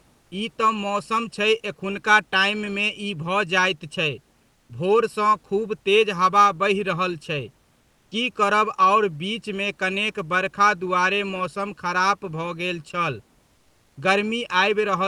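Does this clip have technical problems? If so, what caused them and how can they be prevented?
Yes. Throughout the clip, one channel runs slightly behind the other, by a fraction of a millisecond, and the two are summed to mono. The shared sound then cancels at evenly spaced frequencies, with the first notch somewhere near 700 Hz and more repeating above it. This channel delay produces comb filtering, which gives the speech a hollow, phasey colour that never changes. Aligning the channels before any downmix, or sending a single channel, prevents it.

Three pauses also lose their real room background: 0.21–0.31 s, 4.53–4.69 s (between "भऽ जाइत छै" and "भोरसँ खुब तेज हवा"), and 13.55–13.95 s (right after "खराप भऽ गेल छल"). The cause is likely the call codec's discontinuous transmission, which stops sending during silence and has the receiver fill the gap with comfort noise in place of the background. 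That synthetic hiss is steady and featureless, about 2 to 3 dB quieter than the room sound it replaces, so the background dips and flattens. Disabling DTX on the sending side prevents it.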